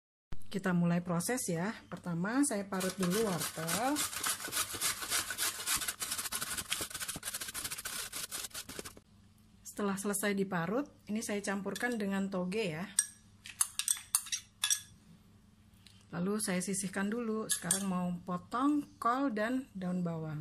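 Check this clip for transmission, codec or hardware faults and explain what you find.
There is one codec fault, pre-echo, at 12.96 to 12.99 s, 13.59 s and 14.61 to 14.64 s. Block-spread quantisation noise, about 12 to 20 dB, smears hiss ahead of each attack.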